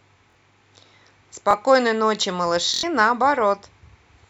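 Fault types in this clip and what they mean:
Repeated buffer: late audio made the device replay its last 23 ms block, causing three stutters; the waveform shows identical copies joined by hard seams.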